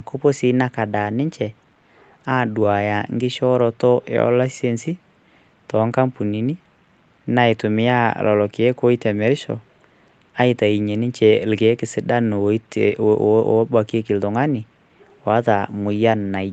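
Nothing stood out on listening to this speech recording, which reaches no higher than about 8 kHz, as expected for audio carried over a call.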